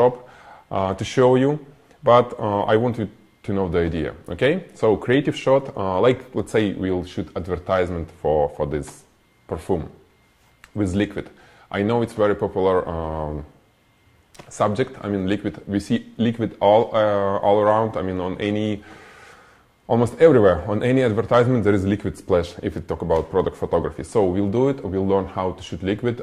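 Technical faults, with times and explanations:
Nothing technical stands out here; there are no faults to list.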